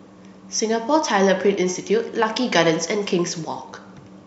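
Nothing in the speech recording registers as a technical fault.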